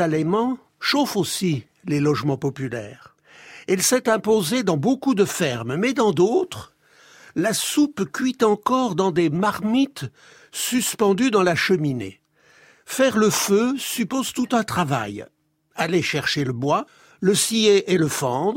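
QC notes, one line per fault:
No faults heard anywhere in this speech recording.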